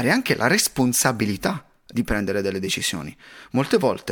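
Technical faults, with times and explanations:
No technical faults, with times and explanations, to report for this speech clip.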